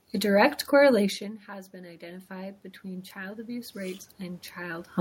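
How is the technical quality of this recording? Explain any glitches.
One fault is audible in the speech: automatic gain rising, from 0.97 s to 4.96 s. Around 1 s the talker moves away and the voice drops by about 19 dB. The automatic gain control responds by slowly adding about 12 dB of gain over roughly four seconds. The room noise swells along with the voice, and that shared rise is what separates it from a talker simply moving back closer.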